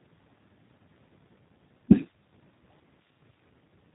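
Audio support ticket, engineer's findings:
G.729 codec, throughout. Band-limited speech, nothing above about 3.8 kHz. Plainly audible roughness and a synthetic edge. Probable component: VoIP leg, narrowband CELP encoder, consistent with G.729A at 8 kbit/s. Mechanism: each 10 ms frame is rebuilt from a vocal tract filter, a pitch predictor and a few pulses per half-frame, so fine detail is discarded and the top band is lost.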